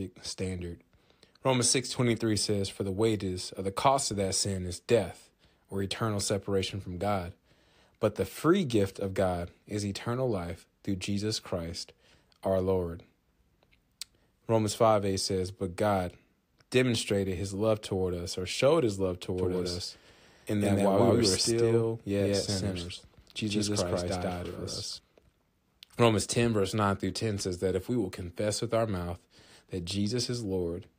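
From 19.38 to 24.98 s the speech picks up a doubled audio track: a second copy trails the first by about 150 ms at roughly equal level. It's likely a second, slower capture path being mixed in, and it cuts in and out abruptly.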